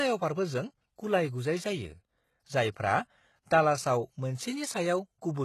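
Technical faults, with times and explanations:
Throughout: HE-AAC compression. There is nothing above about 12.3 kHz, and the damage is plainly audible. The upper range is present but not genuine, and s sounds come out gritty and metallic. This is likely HE-AAC coding, which keeps only the lower spectrum and rebuilds the treble by copying lower bands upward under a coarse envelope. The copied harmonics do not line up with the real ones. The sound points to a very low bitrate, around 16 kbps.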